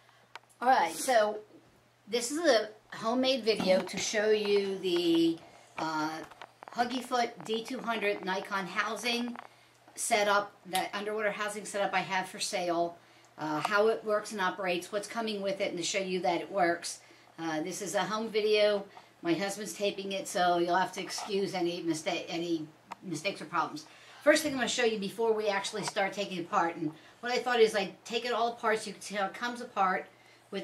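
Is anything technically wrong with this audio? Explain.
Yes, there's a train of clicks from 6.13 to 9.46 s: around fifty sharp, similar ticks at roughly 14 per second, unevenly spaced and poking about 5 dB above the sound. It's likely electrical interference or a faulty connection injecting pulses, and you hear it as popping.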